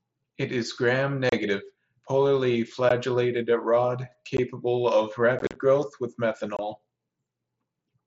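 This speech clip has short, hard-edged holes where the sound drops to silence and snaps back: at 1.29 to 1.33 s (30 ms), at 2.89 s, at 4.37 s, a rough, chopped stretch from 5.39 to 5.56 s just before "growth with", and a gap at 6.57 to 6.59 s right after "growth with". This is unconcealed Bluetooth headset packet loss. Voice packets between headset and phone went missing, and nothing was filled in to cover them. The gap lengths, in multiples of 7.5 ms, fit the small packets of an mSBC wideband link, whose 8 kHz speech band can still be heard around the gaps.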